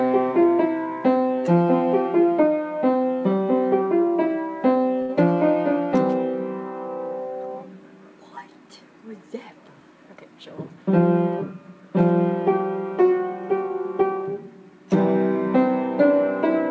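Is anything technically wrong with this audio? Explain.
Yes, there are two playback faults, both heard through a wideband call path with nothing above 8 kHz, consistent with G.722.

From 5.02 to 5.11 s there is a short stall from a late packet. A packet missed its playout time and the jitter buffer ran dry, so the receiver stretched the last sound for 70 ms until the packet arrived, then resumed. Nothing is lost, but the sound hangs briefly with a faint buzz or dip.

From 10.09 to 10.77 s there is a jitter buffer speed-up. Having built up about 70 ms too much delay, the receiver repeatedly trimmed pitch-period-sized slices to catch up. The sound plays about 9% faster at unchanged pitch, so this stretch feels hurried.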